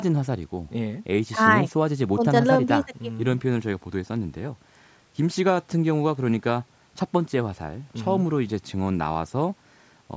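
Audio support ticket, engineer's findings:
No faults found; call microphone processing working as expected.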